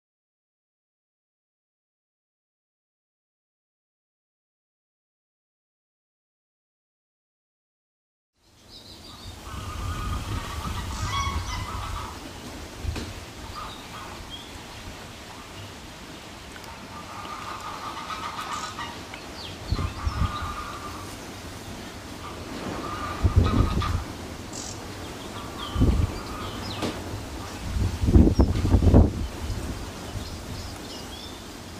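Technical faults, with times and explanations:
Nothing stood out as a technical problem on listening.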